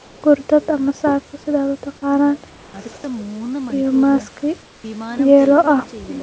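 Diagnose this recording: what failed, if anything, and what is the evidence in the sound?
Comfort noise in place of the background appears in three pauses in this speech, at 0.00–0.22 s, 2.50–2.74 s and 4.62–4.84 s, each roughly 220 to 240 ms long. In these gaps the room background, about 27 to 30 dB below the loudest speech, becomes a flat, featureless hiss about 3 dB quieter. The stage is call processing: the sender's voice detector likely paused transmission, and the receiver synthesised shaped noise until speech resumed.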